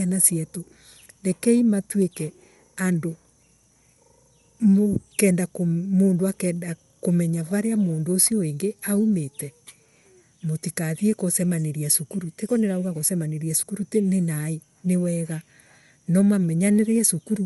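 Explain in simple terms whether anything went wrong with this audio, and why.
Throughout the speech, the voice has a grainy, breathy edge, and nothing comes through above about 11.5 kHz, so the top end sounds dull. The likely cause is Bluetooth LC3 compression, which squeezes the sound in short chunks, consistent with 10 ms frames, and replaces discarded treble detail with noise.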